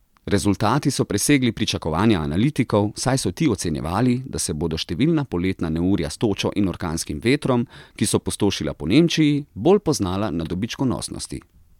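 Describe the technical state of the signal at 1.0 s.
The audio at 1.0 s is intact, with no technical fault present at that point.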